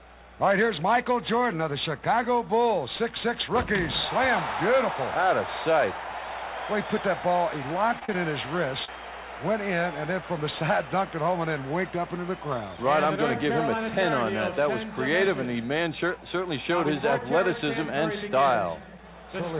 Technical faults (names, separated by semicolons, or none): short concealed packet loss